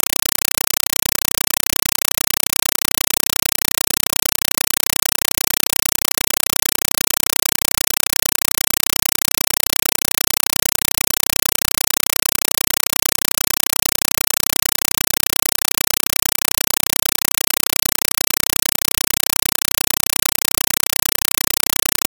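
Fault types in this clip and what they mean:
Compressed stream played as audio: the music is replaced by very loud, chattering static because an AC-3 data stream is being treated as ordinary samples instead of being decoded. Each frame arrives as a burst of noise about 5.33 ms long followed by silence, repeating at 31.25 Hz, which fits a 256 kb/s stream. On a waveform this shows as loud noise blocks separated by quiet gaps. A spectrogram shows evenly spaced broadband vertical stripes about 32 ms apart.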